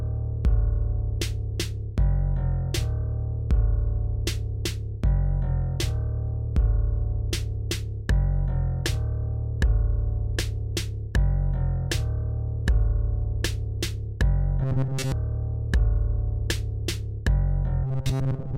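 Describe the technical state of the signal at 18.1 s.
At 18.1 s the audio sits within robotic sound from repeated short buffers, spanning 17.84 to 18.57 s. A rigid, metallic buzz at 133 Hz is present, likely from a roughly 7.5 ms fragment being looped while most of the real audio is skipped.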